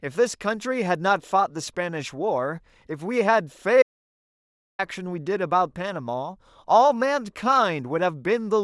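At 3.82 s the speech stops dead mid-flow and returns at 4.79 s, an audio dropout to silence lasting just under a second. The input was likely lost for that span while recording carried on writing silence, so whatever was said then is gone. Unlike a natural pause or a gate closing, the gap holds no room tone or noise floor at all. It is plain silence, entered and left abruptly.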